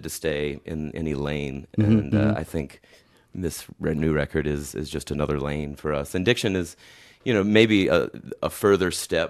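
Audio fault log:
Nothing to log here, as the speech comes across without a single fault worth noting.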